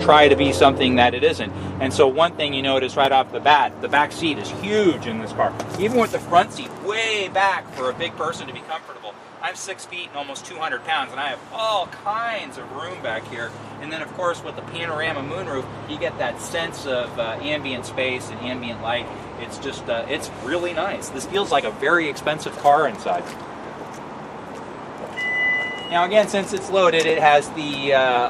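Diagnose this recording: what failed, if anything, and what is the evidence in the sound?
Overlapping chunks at the buffer or chunking stage: short stutters fall at 3.05, 7.06, 11.07, 15.07, 19.08, 23.09 and 27.10 s, spaced almost exactly 4 s apart, which fits 4-second processing blocks. Each new block begins about 7 ms before the previous one ends, so that sliver plays twice at every join. Material is repeated rather than missing, and the spacing is strictly regular, which sets this apart from dropouts or random glitches.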